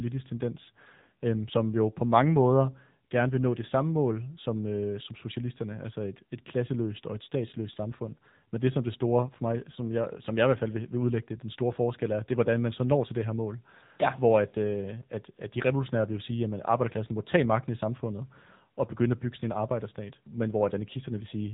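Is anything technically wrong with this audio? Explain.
Yes: AMR narrowband mobile codec damage runs throughout. Nothing above 3.8 kHz survives. The buzzy, synthetic vocal-tract rendering points to roughly 8 kbps, unlike a plain band-limit filter.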